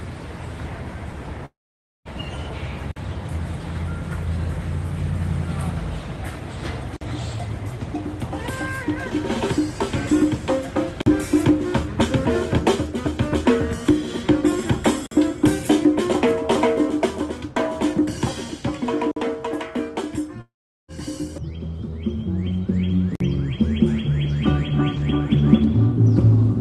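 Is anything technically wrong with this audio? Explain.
Yes. From 1.45 to 2.08 s and from 20.41 to 20.91 s, a likely long network dropout: the last sound smears briefly, then silence, and about 0.6 s and 0.48 s are lost.

At 2.91, 6.96, 11.01, 15.06, 19.11 and 23.15 s, a 50 ms gap between chunks: hard-edged holes every 4 s, with no fading smear and nothing missing.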